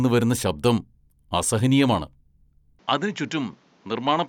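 A speech recording whose sound changes abruptly at 2.79 s and stays changed to the end: everything above 7.6 kHz disappears, the level drops by about 5 dB, and a new noise floor appears roughly 35 dB below the speech, with no gap at the join. The likely cause is an input switched to a poorer device. On a spectrogram the upper band cuts off sharply at 2.79 s; on the waveform the envelope steps down there.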